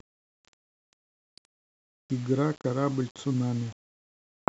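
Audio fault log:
throughout: low bit depth without dither, grainy distortion tracking the speech and roughening quiet passages, likely from rounding to about 7 bits, leaving noise only about 25 dB down.
1.09–1.28 s: playback stall, speech cuts to silence for about 184 ms, likely the player running out of data, then resumes where it stopped.
1.28–2.02 s: catch-up at higher speed, speech plays 1.25 times fast, raising pitch around four semitones while the backlog is recovered, then returns to normal.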